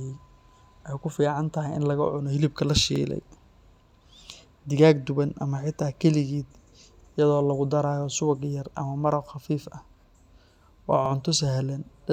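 At 2.96–3.01 s, 7.01–7.06 s and 11.06–11.11 s the speech stutters briefly: overlapping chunks. Each 4-second block starts before the last one finishes, so about 50 ms gets replayed at every join, giving a regular little hiccup.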